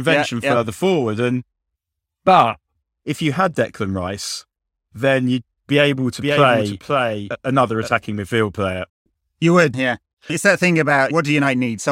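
From 6.21 to 7.89 s, after "you'd be able to" and before "midfield player", there is a doubled audio track. A second copy trails about half a second behind, roughly 5 dB quieter. It is dry and full-band and cuts in and out abruptly. It is likely a second capture path or an out-of-step edit.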